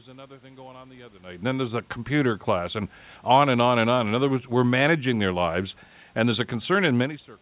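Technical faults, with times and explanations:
No technical faults: the room noise sits about 41 dB below the speech, the level shifts near 1 s and 7 s are the talker moving relative to the microphone, and the call path leaves nothing above 4 kHz, which fits G.711 A-law at 64 kbps.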